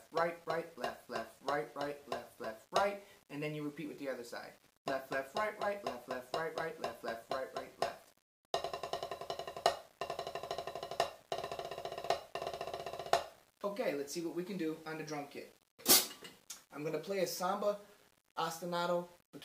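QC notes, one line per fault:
throughout: low bit depth without dither, grainy distortion that follows the sound and roughens quiet parts, about 30 dB down, likely undithered rounding fitting 9 bits.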